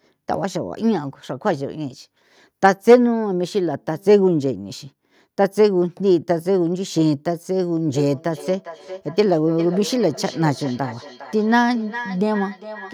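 Feedback echo between two devices affects this speech clip from 7.95 s to the end at 12.94 s. Each stretch of speech comes back roughly every 0.4 s, with the loudest return about 14 dB below the direct speech. Two devices in the same room are on one call. One plays what the other's microphone sent, and that microphone picks it up again. Each device's echo canceller removes only its own playback, so the repeats pass through.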